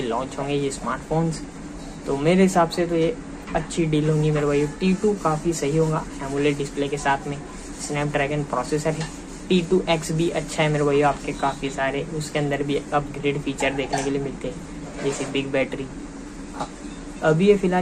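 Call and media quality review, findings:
No faults found in the clip; no action required.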